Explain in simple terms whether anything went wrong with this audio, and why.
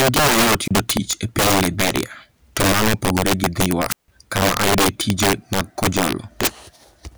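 Yes, two things went wrong. Throughout the speech there is integer overflow: the loudest peaks are pushed too far and wrap to the opposite extreme instead of being held at the limit. That produces violent, harsh cracks on a small share of loud moments, much sharper than the flattened buzz of ordinary clipping.

There are also two wireless microphone squelch dropouts, where the radio signal weakened until the receiver muted itself. Between 0.63 and 0.71 s, after "en gima yot" and before "tich e piny", hiss rises and then about 30 ms of near silence follows. From 3.88 to 4.08 s, just before "kama ayudoe tije mag", the silence lasts about 157 ms. The rising hiss before each gap is what separates these from a clean digital cut.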